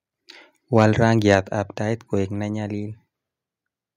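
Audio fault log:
0.76–1.35 s, microphone overload: the loudest speech peaks here have their tops flattened, giving a harsh, crackling edge. The likely cause is input gain set too high, driving the signal about 4 dB past the converter's limit and clipping under one percent of samples.
1.35 s, microphone volume stepped down: right after the distorted stretch, speech and background fall together by about 4 dB in a single abrupt step, likely the call software cutting the device's input volume in response to the clipping just before.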